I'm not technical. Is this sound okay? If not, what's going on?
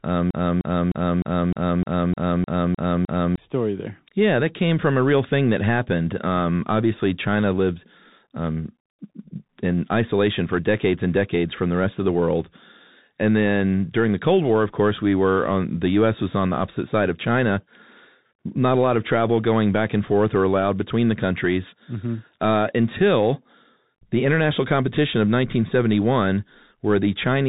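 No. From the very start to 3.38 s, there is a broken-record loop. A piece of speech about 0.3 seconds long plays ten times in a row. The likely cause is a stalled player or stream resending its last chunk. What should have played there is lost.

The whole clip also carries the Bluetooth CVSD headset codec sound. This is the basic phone-call mode of a Bluetooth headset. Nothing above 3.8 kHz gets through, so it sounds muffled. The damage is plainly audible: s sounds turn scratchy, louder high parts distort, and a grainy hiss sits underneath.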